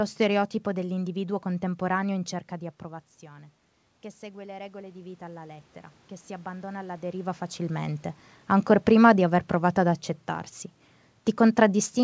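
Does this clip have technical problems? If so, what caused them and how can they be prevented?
Yes. From 4.19 to 5.72 s, after "cerca di approvazione che", voice and room noise swell together by about 4 dB. This is automatic gain rising, with the gain control reacting to an input drop of about 14 dB. To prevent it, slow or cap the AGC's gain increase, or keep the talker at a steady distance from the microphone.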